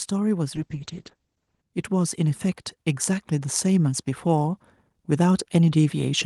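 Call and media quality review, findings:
Call bitrate drop, 0.57–1.69 s. Speech turns rough and muffled, top end gone. Encoder rate cut from 32 kbps to 9 kbps after bandwidth estimate fell. Bottomed out about 1.05 s. Coarser coding, audio bandwidth narrowed from 20 kHz to 8 kHz.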